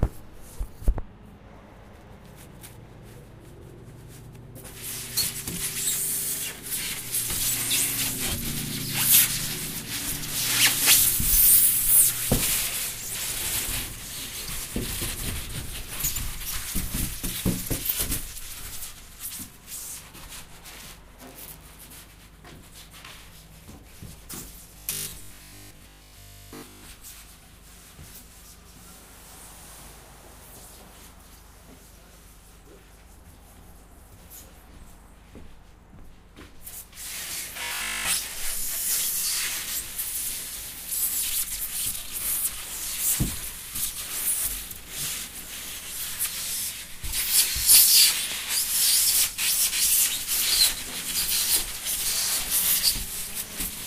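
From 24.79 to 26.83 s, and again from 37.63 to 38.05 s, the sound turns into a rigid, metallic 50 Hz buzz: robotic sound from repeated short buffers, likely 20 ms chunks looped while real audio is skipped. Unlike mains hum, it replaces the sound, mostly in the first stretch and completely in the second.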